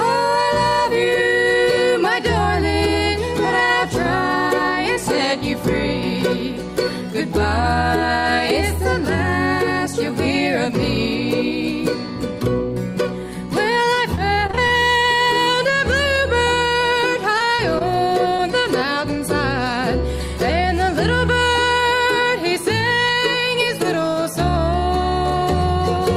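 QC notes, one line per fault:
14.15 to 14.74 s and 16.68 to 17.82 s, repeated packet loss (robotic sound): audio keeps dropping out in short bursts, six breaks in the first stretch and five in the second, none longer than about 25 ms. Each hole is papered over by extending the last sound, so the texture turns choppy, with pieces missing. The first stretch is denser, with roughly a fifth of it concealed. Unlike a single dropout, the breaks recur, each hole following soon after the last.
18.36 to 18.40 s, short concealed packet loss: one isolated gap of about 20 ms, filled by continuing the preceding sound and then blending back into the real signal. It comes through as a brief smear or wobble rather than silence. Because it is a single event with no neighbours, it never builds into the repeated breaks of the earlier stretches.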